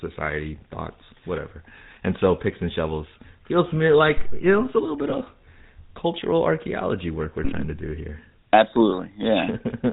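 Speech runs through the GSM full-rate codec the whole way, so it's buzzy and gravelly with nothing above 4 kHz; the damage fits a 13 kbps GSM full-rate stream. At 4.17 to 4.54 s, between "shovels feels to me" and "know it's a little", there's a phantom power thump, a deep bump from a supply switching on the live input that dies away in about 83 ms. Right after "it's a little bit", at 5.10 to 5.15 s, a lost GSM frame gets patched by repeating the previous frame, leaving a brief rough, metallic ring that fits a single dropped 20 ms frame.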